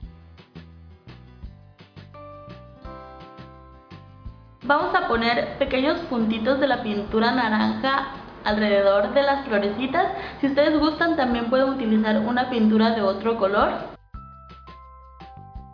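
No technical faults can be heard anywhere in the recording; the signal stays continuous and stable throughout.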